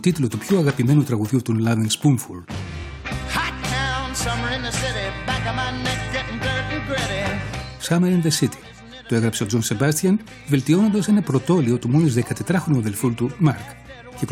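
Nothing goes wrong anywhere in this recording; there are no faults to point out, so you can just sit back and listen.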